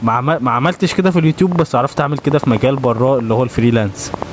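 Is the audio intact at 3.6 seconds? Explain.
No. At 3.6 s the sound is caught in a train of clicks running from 1.52 s to 4.23 s: irregularly spaced ticks at about 6.3 per second, peaking a few dB above the sound. Their steady, repeated shape points to a likely source in interference from nearby equipment or a faulty connection.

Gain pumping is also present here, as it is throughout. Gain set far too high is likely pulled down by a fast limiter on each loud sound. The level swings by roughly 15 dB, squashing the dynamics.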